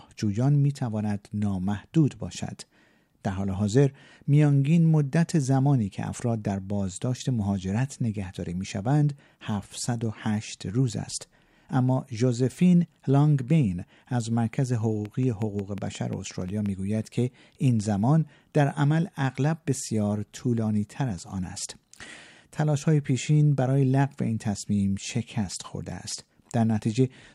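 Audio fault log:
15.05 to 16.67 s, train of clicks: a steady ticking rides over the speech for a little over a second and a half, about ten sharp pops arriving evenly at 5.6 per second, each much the same in shape and roughly as loud as the speech itself. Such an evenly paced run of near-identical pulses likely comes from electrical interference from nearby equipment or a faulty connection or power supply, injecting the same spike again and again.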